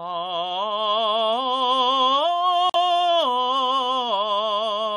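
At about 2.70 s the music drops out completely for roughly 60 ms, up to 2.76 s, then comes back further along as if it had kept playing. That's a Bluetooth dropout, most likely a couple of packets arriving too late at the headphones and being thrown away.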